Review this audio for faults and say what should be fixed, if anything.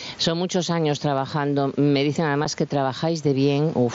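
Gain pumping runs through the whole speech recording. The gain swings by roughly 15 dB. Loud and quiet passages sit unnaturally close together, and the result sounds squashed. The likely cause is input gain set far too high for the microphone, with a fast limiter or compressor clamping down on every peak. To prevent it, lower the input gain so peaks sit well below the limiter threshold.

Unconcealed Bluetooth headset packet loss occurs at 2.45 s, leaving a hole of about 7.5 ms, which fits a single lost mSBC frame. The headset-to-phone link dropped that packet, and nothing filled the gap, so the audio cuts out abruptly and resumes with a sharp edge that can click. The mSBC wideband audio around it, limited to 8 kHz, carries through to the dropout. To prevent it, keep the headset close to the phone with a clear radio path.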